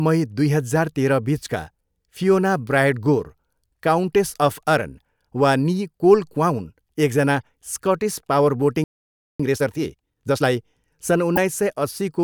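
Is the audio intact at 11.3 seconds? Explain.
No. From 11.32 to 11.38 s the speech hits damaged data in a compressed stream: corrupted bytes make the decoder misread frames and lose sync until it finds a valid frame header, producing a brief chirp, squawk, click or short hole.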